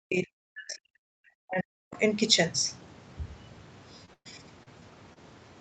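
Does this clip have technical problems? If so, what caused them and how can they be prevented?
Yes. From 0.0 to 1.95 s, the echo canceller likely mistook the talker for loudspeaker echo while both sides spoke, producing speech suppressed in double talk: the voice drops by as much as about 40 dB and breaks up for roughly two seconds. Tuning the canceller's double-talk detection, or using a headset, prevents this.

Short concealed packet loss occurs at 4.05–4.09, 4.63–4.68, 4.80–4.83 and 5.13–5.18 s. Audio arrived too late for the decoder, which filled each gap of 13 to 30 ms by extending the preceding sound. Each gap is heard as a brief smear or wobble. A steadier network connection or a larger jitter buffer prevents these gaps.

A burst of packet loss runs from 4.13 to 4.27 s. About 120 ms went missing in a row, and concealment stretched the last sound and then faded it, leaving roughly 70 ms of silence before the audio resumes further on. 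Reducing network congestion, or enabling forward error correction in the codec, prevents these bursts.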